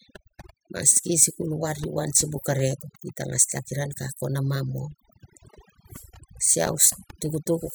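Speech, and it's suffering from overdone noise removal the whole way through. The reduction was clearly pushed too hard: bands near the noise floor get clamped down or switched off, so the background drops and breaks up into twinkly specks and quiet parts of the voice go with them.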